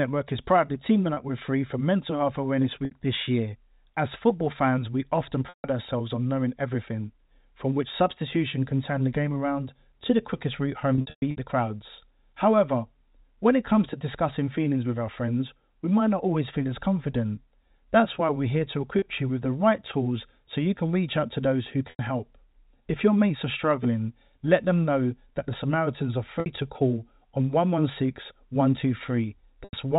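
Packet loss with pitch repetition breaks the speech eight times. Gaps fall at 1.14 s (30 ms), 2.85 s (60 ms), 5.49 s (150 ms), 18.99 s (30 ms), 21.9 s (90 ms), 26.4 s (60 ms) and 29.64 s (90 ms). From 10.95 to 11.37 s, 270 ms is lost in scattered bursts. The longest burst is 120 ms. The receiver fills each hole by repeating the last pitch cycle. Short gaps sound held and buzzy. Longer ones fade towards silence.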